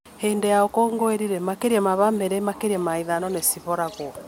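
No technical faults can be heard anywhere in the speech.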